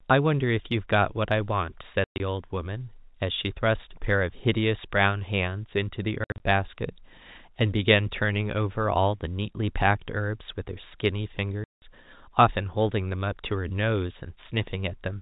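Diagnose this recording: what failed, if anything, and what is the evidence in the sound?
Packet loss filled with silence, a network fault, chops the speech at 2.04–2.2 s, 6.24–6.4 s and 11.64–11.82 s. The first two spans are broken into short dropouts, with the longest runs 120 ms and 60 ms; the third is one solid 180 ms hole. Each gap starts and stops abruptly, and the lengths fit 20 ms packets. The receiver did no concealment and played silence in their place.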